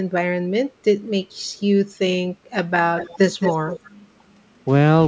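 From 2.98 to 3.19 s, and again from 3.4 to 3.91 s, an echo leak is heard: a faint, delayed copy of the speech trailing about 220 ms behind it, quieter in the first stretch and noticeably stronger in the second. The likely cause is a loudspeaker on the far end whose echo canceller let some of its microphone's pickup return down the line. On a spectrogram, the speech's harmonic patterns reappear shifted right by 220 ms, all below the 8 kHz ceiling of the call's band.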